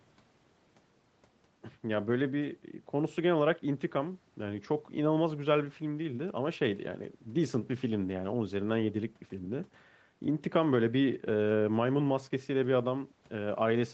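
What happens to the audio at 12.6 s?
At 12.6 s the speech comes through intact, with no dropout, glitch or distortion, just the steady band-limited sound of a call path whose content stops at about 8 kHz.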